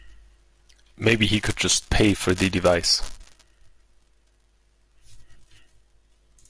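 No technical faults can be heard in this speech.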